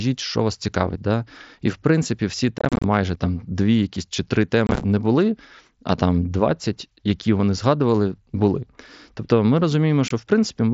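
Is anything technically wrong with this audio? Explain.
Yes. Unconcealed Bluetooth headset packet loss hits the speech at 2.58 to 2.84 s, 4.67 to 4.84 s and 10.08 to 10.11 s. Short voice packets between headset and phone went missing and nothing patched the gaps, so the mSBC wideband link simply dropped out. About 150 ms is lost across the first stretch and 75 ms across the second, in runs of up to 30 ms, giving a chopped, rough crackle. The last is a single brief hole.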